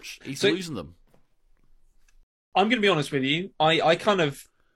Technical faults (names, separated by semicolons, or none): rebuffering stall